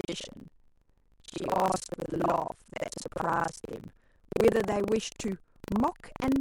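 Buffer tearing runs through the whole speech clip: the writing side and the reading side of the ring buffer have drifted until they cross inside every period, so most of each buffer replays audio from about 70 ms earlier, spliced in with hard joins, producing a continuous robotic 25 Hz rattle whenever speech is present.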